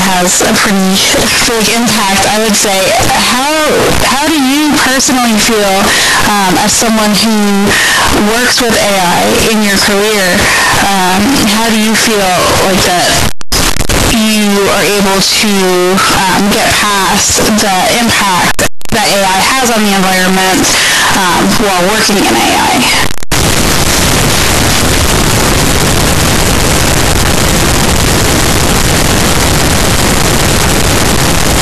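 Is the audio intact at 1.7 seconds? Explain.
No, not at 1.7 s or anywhere else in this speech clip, since the damage runs from start to finish. It sounds like signed and unsigned mixed up, most likely 16-bit samples read with the wrong sign convention. Flipping the top bit turns every zero crossing into a leap across the full range, so you hear loud, harsh distortion, and the quiet stretches come out just as loud as the rest.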